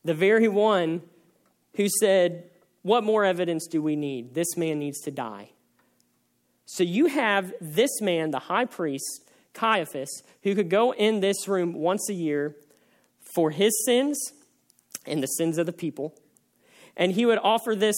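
Speech recording with no faults to report: no dropouts, clicks, distortion or level problems are audible anywhere in the clip.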